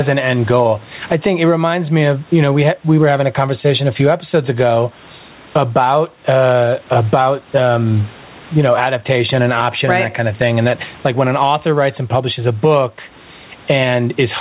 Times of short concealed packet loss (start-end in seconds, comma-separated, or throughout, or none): none